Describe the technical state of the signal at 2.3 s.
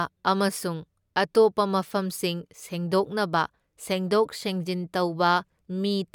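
The signal is intact at 2.3 s, with no audible fault at that point in the speech.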